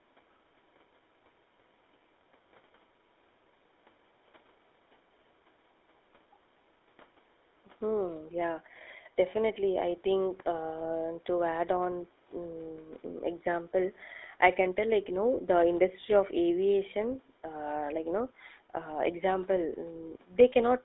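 Speech throughout with a buzzy, gravelly roughness from the GSM full-rate codec, its coarse pulse excitation plainly audible, squeezed into roughly 300 Hz to 3.7 kHz, which fits a 13 kbps phone link; the call's microphone high-pass just trims the lowest bass.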